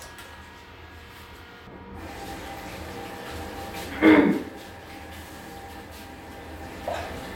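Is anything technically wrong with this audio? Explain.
Yes. From 1.67 s through to the end, the sound turns dull and muffled, as if a blanket had been thrown over it, with the top end sloping away smoothly rather than cutting off at a wall. This is de-emphasis applied wrongly: a treble-cut filter intended to reverse pre-emphasis was applied to material that never had any boost, or applied a second time. The response falls progressively with frequency, leaving 10 kHz about 11 dB below 1 kHz.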